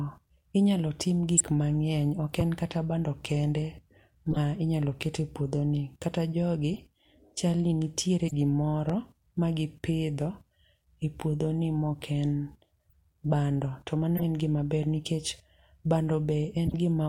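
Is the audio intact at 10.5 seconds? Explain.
Yes, at 10.5 seconds the speech runs on intact, with no dropout, click, distortion or other fault to be heard at that point.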